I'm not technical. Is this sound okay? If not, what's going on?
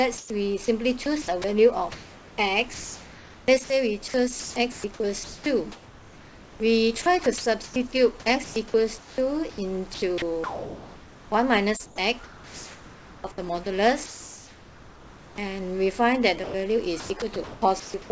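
No, not quite. The sound came through a call system whose voice detector keeps switching transmission on and off, and that's likely what's causing the trouble.

Sound chopped by the voice detector: from 0.18 to 2.38, 3.46 to 5.46, 7.02 to 13.24 and 16.44 to 18.10 s, quiet bits drop out and get patched with fake hiss, so it sounds choppy.

Comfort noise in place of the background: from 14.06 to 15.38 s, the real background disappears and a flat, featureless hiss fills the pause.

Onset clipped by the voice detector: at 15.35 to 15.38 s, the detector is likely slow to react when sound returns, so the start is cut and it begins abruptly.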